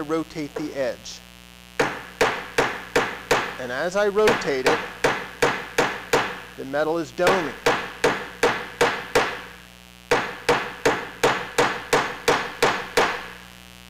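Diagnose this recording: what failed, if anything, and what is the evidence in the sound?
Mains buzz runs throughout, a raspy 60 Hz buzz roughly 25 dB below the signal: switching spikes leaking into analogue wiring, with harmonics reaching several kHz.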